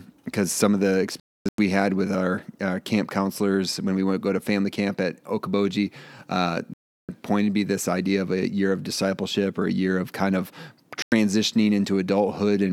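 Digital broadcast dropouts cut the speech three times. At 1.20 s, after "of the", the sound mutes in several short holes spread over about 0.38 s, the longest lasting 0.26 s, before returning at "had with our uh". At 6.74 s a 0.35 s silence comes just before "pointed me this idea". At 11.02 s, after "year of kind of", there is a 0.1 s gap. The receiver muted whenever frames failed, and the gap lengths fit frames of about 32 ms. The audio sent during those gaps is lost.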